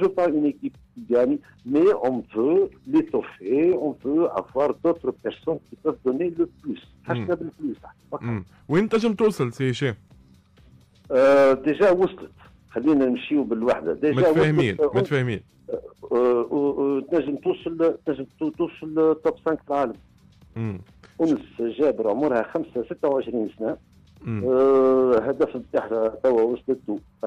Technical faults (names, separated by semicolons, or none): none